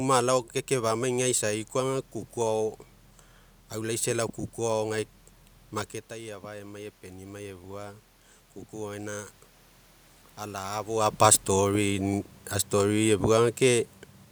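A speech recording in which the automatic gain control responds to a drop in level of about 11 dB, when the talker moves away at around 6 s, by rising by about 4 dB from 6.09 to 8.08 s, so voice and room noise swell together.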